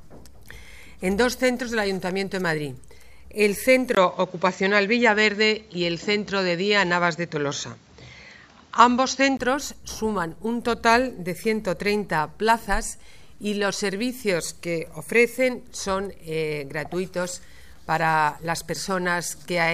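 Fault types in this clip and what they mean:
Input switched to a poorer device: From 3.95 s the sound suddenly turns duller and boxier, with nothing above 7.6 kHz. A gap of about 20 ms marks the change. The level shifts modestly, and a new background noise appears well below the sound. At 9.39 s the fuller sound returns. The likely cause is the recording input changing to a narrower-band microphone or headset profile, then switching back.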